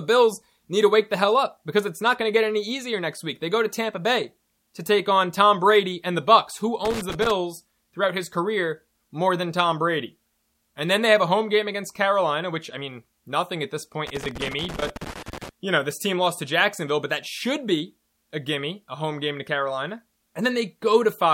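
At 6.85 s the speech breaks into loose connector crackle. It lasts until 7.31 s. A worn or dirty contact in the signal path is making and breaking as it shifts. Each break chops the signal. The result is an irregular scratching burst. It returns at 14.07 s and runs longer this time, to 15.49 s. That second burst is more sustained.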